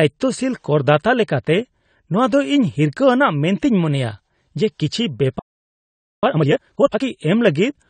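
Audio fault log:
Throughout: AAC compression. The speech sounds dull and smeared, with plainly audible codec damage and nothing above 9 kHz. This is likely AAC-LC coding at a low bitrate, which fits about 32 kbps, where the encoder drops the high band and quantises the remaining frequency lines coarsely against its hearing model.
5.39–6.23 s: playback stall. The speech stops in mid-flow and the output falls silent for about 0.84 s before sound returns. The likely cause is that the player ran out of buffered data or its thread was blocked, so nothing was written to the output until it recovered.
6.23–7.05 s: time-compressed catch-up. Right after the gap, the speech is hurried along at twice normal speed while keeping its pitch. The player is shortening the backlog left by the stall by cutting out small pieces of audio and cross-fading the joins until it is back on schedule.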